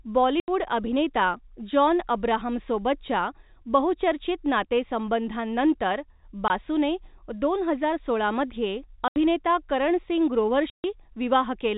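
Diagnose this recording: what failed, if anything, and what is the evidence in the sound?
The failure is at the network stage: packet loss filled with silence. The speech drops to dead silence at 0.40–0.48 s (80 ms), 6.48–6.50 s (20 ms), 9.08–9.16 s (80 ms) and 10.70–10.84 s (140 ms). Every gap is a multiple of 20 ms, which fits lost 20 ms packets replaced by zeros. On a waveform these show as flat blocks with abrupt edges. A spectrogram shows vertical blank columns with sharp edges, cutting across the telephone-band content below 4 kHz.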